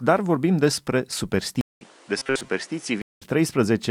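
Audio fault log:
1.61–3.22 s, input switched to a poorer device: a 0.2 s silence, then the sound goes duller with new background noise about 30 dB under it and unchanged loudness, likely a change of microphone. The spectrogram shows a narrower band, plus a raised noise floor.
2.18–2.51 s, robotic sound from repeated short buffers: a rigid metallic buzz at 134 Hz, likely from one roughly 7.5 ms chunk replayed to fill gaps while most real audio is skipped. The waveform shows identical repeating cycles, and the spectrogram shows evenly spaced harmonics at 134 Hz multiples.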